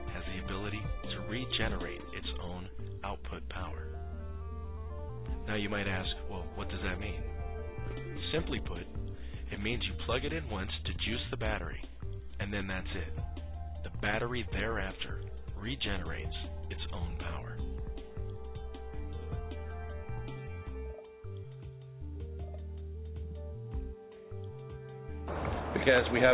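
Nothing stood out on listening, though the audio has the narrow sound of a telephone-grade call path with nothing above 4 kHz, which fits a G.711 A-law link.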